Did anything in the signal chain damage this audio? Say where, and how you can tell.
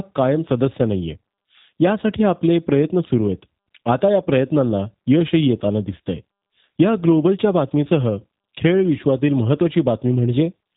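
Yes: G.729 codec damage throughout, at the codec stage. Nothing sounds above 3.8 kHz, and the rough, synthetic speech, rebuilt from filter, pitch and pulse parameters, suggests about 8 kbit/s.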